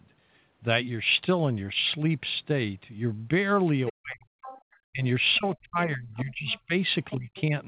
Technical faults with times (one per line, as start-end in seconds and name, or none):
3.86-4.60 other side's voice leaking through
3.90-7.55 speech suppressed in double talk
5.34-5.57 other side's voice leaking through
6.15-7.41 other side's voice leaking through